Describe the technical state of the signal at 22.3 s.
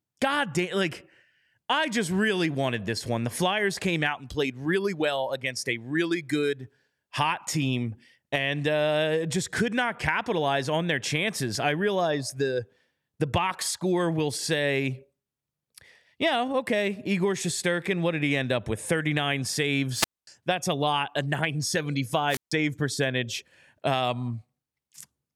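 At 22.3 s the speech hits a wireless microphone squelch dropout, 22.28 to 22.52 s. The radio link fades, hiss rises, and the receiver mutes for about 147 ms.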